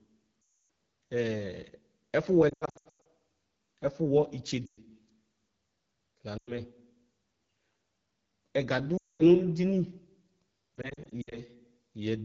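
The speech carries AMR wideband (HD Voice) codec damage from start to finish. The roughness and rasp point to one of its lowest rates, fitting 8.85 kbit/s. At that rate the pulse-driven vocal tract model has too few bits, so it cannot track the voice cleanly up to 6.4 kHz. The band above is only shaped noise, which adds a hissy edge. The damage is plainly audible.

Lost AMR speech frames break in six times. The decoder repeats the last good pitch and vocal tract settings at falling gain, so the sound smears and fades. From 0.41 to 0.69 s it drops out for 280 ms. From 2.49 to 3.05 s, scattered losses bring dips and warbles, with the longest gap about 100 ms. Shorter fades follow at 4.65 to 4.80 s and 6.38 to 6.60 s. A 220 ms fade falls at 8.98 to 9.23 s. Scattered warbles run from 10.76 to 11.38 s. The speech returns weak or rough for a moment after each one.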